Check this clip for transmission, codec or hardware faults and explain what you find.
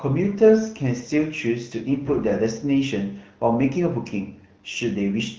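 No faults found.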